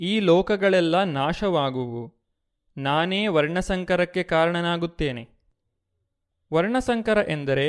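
Nothing stood out as a technical fault on listening to this speech recording.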